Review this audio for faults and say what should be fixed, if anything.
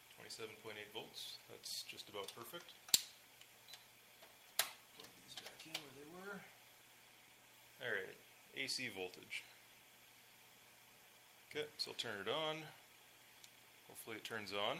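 Nothing needs to be fixed, as the review turned up no faults in this audio.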